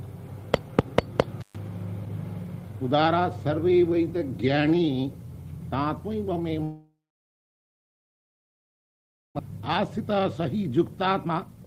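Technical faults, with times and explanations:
1.41–1.56 s, intermittent contact: the audio cuts out for about 0.12 s, with a crackle as it drops and another as it returns. A faint hiss is all that remains while the line is open. The cause is a loose cable or plug briefly breaking the signal path. The sharp edges and the hiss underneath point to a physical connection opening and closing rather than anything in the digital chain.
6.63–9.41 s, long network dropout: the audio does not stop abruptly. The last sound is stretched into a short fading buzz or hiss, then about 2.4 s of silence follows, for roughly 2.8 s of filled-in gap in all. When the sound returns, about 1.6 s of material is simply missing. This is likely a stream interruption of around a second of delay, which the receiver papered over with concealment and then silence.
9.50–11.66 s, jitter buffer speed-up: from here to the end, the audio plays at about 119% speed with unchanged pitch. 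It sounds hurried and compressed in time. After the dropout, the buffer held far more audio than its target. To recover, the receiver repeatedly cut out short pitch-period-length slices, removing around 0.4 s in total. Pitch survives because each cut spans whole periods, while the timing tightens noticeably.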